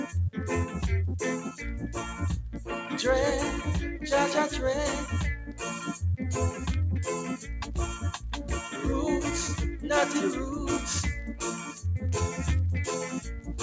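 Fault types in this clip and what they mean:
Sound cut by the noise suppressor: from 5.40 to 5.61 s the noise suppressor mistook part of the sound for background noise and pulled its level down harder than the surrounding audio, with the deepest dip about 7 dB. Roughly a fifth of a second is affected, heard as a brief sag where the sound thins before the level recovers, while the call microphone processing's band limit at 8 kHz stays unchanged.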